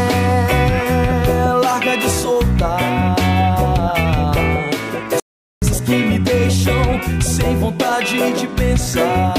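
At 5.20 s there is a playback stall, most likely because the player ran short of buffered data or its output thread was briefly blocked. The sound cuts off abruptly mid-flow, leaving about 0.42 s of silence until playback recovers at 5.62 s and the audio continues.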